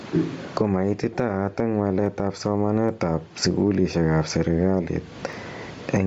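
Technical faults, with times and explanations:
Throughout, gain pumping: the input gain was likely set far too high, so a fast limiter clamps down on every loud syllable. The level swings by roughly 25 dB, squashing loud and soft passages together.
Throughout, Bluetooth LC3 compression: the speech was likely carried over a low-bitrate LE Audio link, with a sound that fits 10 ms frames at around 32 kbps. Much of the upper spectrum is discarded and refilled with noise, giving the speech a breathy, grainy edge.
1.20 s, 2.06 s, 2.89 s, 3.94 s (just before "ab serekali") and 5.33 s (just after "ab serekali"), dropped samples: each time, a tiny slice of the stream, around 0.15 ms, likely went missing. The waveform jumps abruptly to a later value, producing a single sharp click, too brief to remove any sound.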